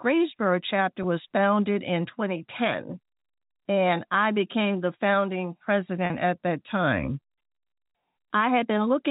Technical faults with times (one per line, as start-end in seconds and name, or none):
1.03 packet loss with pitch repetition
6.06-6.10 packet loss with pitch repetition